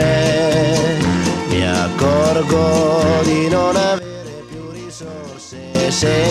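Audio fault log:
3.99–5.75 s, sudden gain jump: the level drops by about 16 dB in a single step, sound and background noise falling together with no fade, then returns at 5.75 s. Likely a gain setting or bit shift applied instantly, without a ramp.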